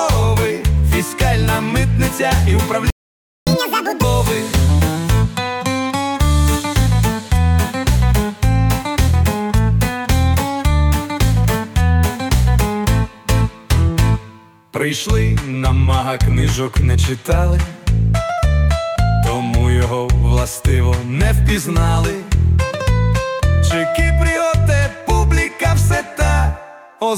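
At 2.90 s the sound cuts out mid-flow. Silence holds until 3.47 s, about 0.57 s. This is a playback stall. The likely cause is that the player ran out of buffered data or its thread was blocked. Output resumes where it stopped.

From 3.47 s to 4.04 s comes catch-up at higher speed. The player resamples its backlog at twice normal speed to recover the lost time. Pitch jumps by around ten semitones, giving a chipmunk-like rush. Then speed and pitch drop back to normal.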